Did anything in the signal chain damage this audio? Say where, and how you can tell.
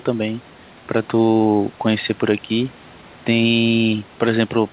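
No, nothing in the chain damaged this speech; it just has the narrow, phone-like sound of a G.711 call, with nothing above 4 kHz, which is simply how that codec carries audio.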